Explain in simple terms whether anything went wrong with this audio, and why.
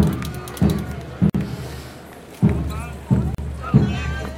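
Yes, something went wrong: the sound drops out twice with a gap at a join of encoded pieces. The first silence runs from 1.30 to 1.35 s (50 ms), the second from 3.35 to 3.38 s (about 38 ms), two seconds apart. The audio was likely encoded in separate chunks and stitched together without trimming the silent padding each encoder run adds at its start and end. The sound stops, then resumes where it left off.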